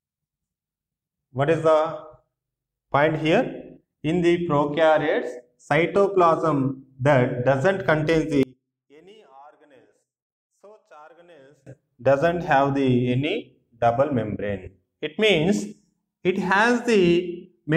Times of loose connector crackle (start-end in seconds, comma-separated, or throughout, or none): none